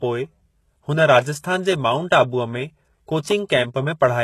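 A speech recording, likely passed through HE-AAC compression at a very low bitrate, around 16 kbps, for its full length: the treble is rebuilt from copied lower bands, so s sounds turn gritty and lispy, and nothing reaches above 12.3 kHz.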